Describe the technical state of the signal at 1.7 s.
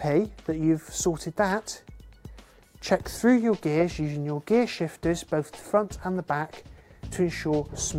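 The signal at 1.7 s is intact, with no audible fault at that point.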